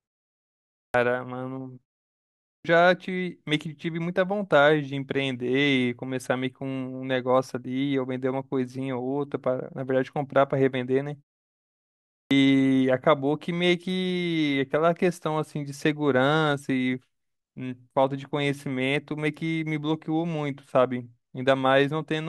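Speech clip with a clipped start after a pause at 0.59, 2.30 and 11.98 s: roughly 0.33–0.35 s is lost each time, as the output device wakes from silence. On the waveform, the speech energy starts abruptly at full level out of flat silence.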